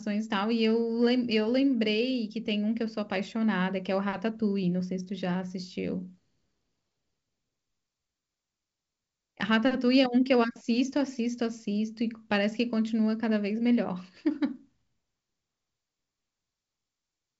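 No technical faults are audible anywhere in this speech.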